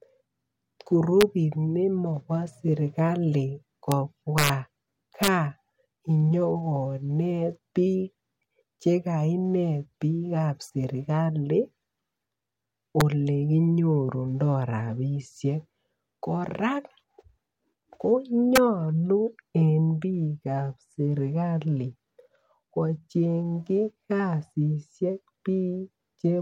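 Integer overflow cracks hit the speech at 1.21 s, just before "nekobo serikali", at 3.92 s right after it, then 4.38 to 4.49, 5.23 to 5.28, 13.01 and 18.56 s. Peaks pushed past the integer limit, up to about 4 dB over, and wrapped to the opposite sign, giving harsh snaps far nastier than clipping.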